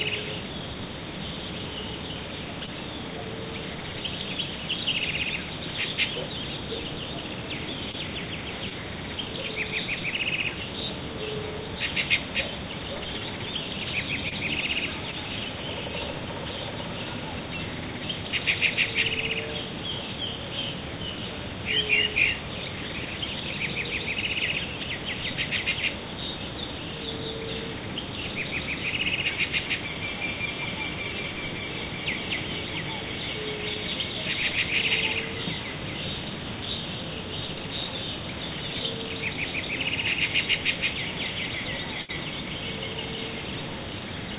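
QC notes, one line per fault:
2.66, 7.91, 8.69, 14.29 and 15.11 s, short concealed packet loss: at each point 20 ms of audio never arrived in time. The receiver covered gaps of 12 to 26 ms by extending the preceding sound, repeating its period if it was tonal or substituting matched noise if not, then crossfading into the real signal. Each one comes across as a brief smear or wobble in audio that, like the rest of the clip, has nothing above 4 kHz.
42.02 to 42.10 s, burst of packet loss: a run of late or lost packets left a hole the receiver filled for 61 ms, while 60 ms of the original audio is gone. Concealment carried the last sound forward and lowered its level as the gap continued, which renders a tonal sound as a sustained buzz and a noisy one as a decaying hiss, before playback picks up again past the missing section.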